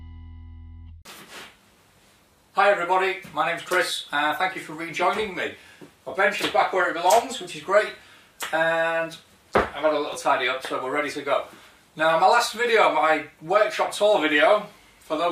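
Chunks out of order occur at 10.12 to 10.14 s, where a block of about 10.7 ms arrives one chunk late and plays after the block that should have followed it. No audio is missing; two short pieces simply swap places. The reordering leaves three abrupt joins within roughly 20 ms, heard as a brief jumbled stutter.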